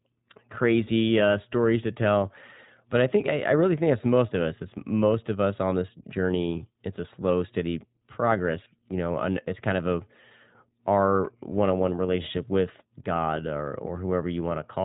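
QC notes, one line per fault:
Throughout, iLBC codec: nothing above 4 kHz passes, and the speech sounds plainly rough and synthetic. That fits independently coded 20 ms frames at roughly 15 kbps.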